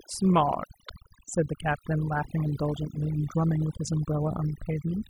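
Overdone noise removal runs through the whole speech recording: a noise reducer pushed too hard mutes any frequency band close to its noise estimate, taking quiet voice detail along. The background falls to near silence with twinkling specks, and a spectrogram shows scattered isolated blips between speech.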